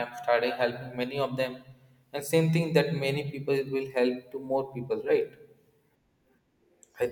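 Nothing goes wrong anywhere in this speech recording, with no technical faults to point out at any moment.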